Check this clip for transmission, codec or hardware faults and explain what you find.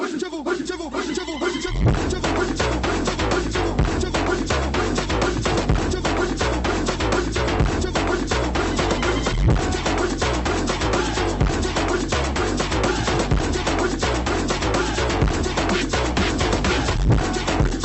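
Nothing stood out on listening; the audio sounds as expected for a call carried over Opus at 24 kbps with its band limited to about 8 kHz.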